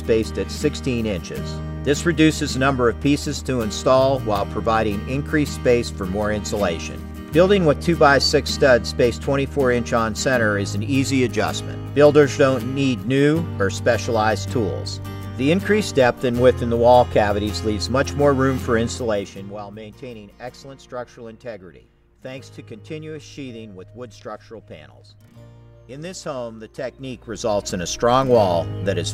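From 26.76 to 27.75 s, zipper noise: a level move of roughly 15 dB lands in coarse steps, about a hundred per second, ticking audibly.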